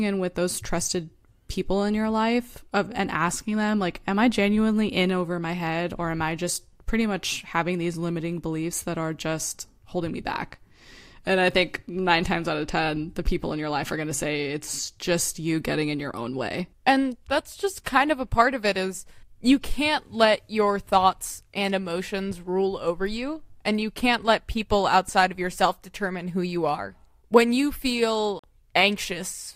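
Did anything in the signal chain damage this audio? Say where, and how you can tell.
Yes. At 28.39 to 28.44 s the speech drops to silence for about 44 ms, then resumes at the point it would have reached had it kept playing. This is likely a Bluetooth dropout at playback, consistent with a few wireless packets missing their deadline. No material is lost from the timeline, which rules out an edit, and nothing fills the gap as concealment would.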